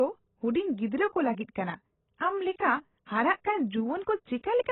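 Speech, and it's band-limited the whole way through: nothing comes through above 4 kHz, so it sounds dull, with a warbly, smeared texture on sustained vowels and fizzy, mushy sibilants. That's the signature of heavy AAC compression, likely AAC-LC squeezed to a very low rate. The damage points to something around 16 kbps, where the encoder drops the top band and starves what's left of bits.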